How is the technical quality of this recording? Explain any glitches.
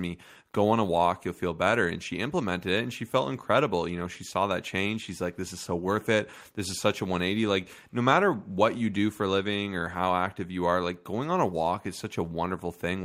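The speech recording carries no technical glitches at any point; the signal stays intact and uninterrupted throughout.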